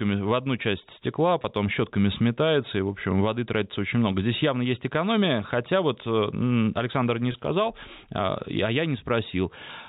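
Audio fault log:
1.42–1.44 s and 7.32–7.34 s, packet loss with pitch repetition: two very brief holds. The first falls between "в одну часть стекла" and "щетками сметается и в". Each gap lasts about 20 ms, which fits a single lost packet. The receiver bridged it by repeating the last pitch period, so the sound stretches into a slightly buzzy, held tone instead of dropping out. That steady repeated waveform separates it from a plain dropout's silence or click. Through the G.711 telephone band limit, the held tone stays dull.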